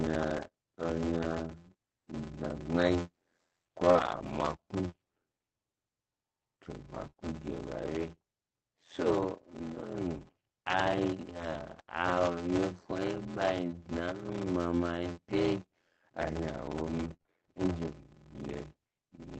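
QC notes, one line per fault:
throughout, block size mismatch (padded): A steady buzz at 86.1 Hz sits under all of the speech, and everything plays slowly, at 0.625 times normal speed, yet the timbre stays about where it should be. One stage hands over shorter blocks than the next stage reads, which fits a 512-sample read block. The unfilled remainder of each block is padded with silence. That regular gap produces the buzz and stretches the timing without changing the timbre.
0.37–7.23 s, scattered short gaps: Brief ticks and small smears turn up here and there while the speech stays clear. About three packets went missing or arrived late. The receiver covered each hole by extending the last sound it had, filling around 70 ms in total. No single patch runs past about 30 ms, so each sounds like a hiccup rather than a dropout.
14.33–17.30 s, scattered short gaps: The same kind of quick hiccups and smeared moments return, much denser over this shorter stretch. 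Roughly four packets were lost or delayed, and each was concealed by carrying the previous sound forward. Together the patches cover about 70 ms, with none longer than about 30 ms, so the damage is heard as ticks rather than silence.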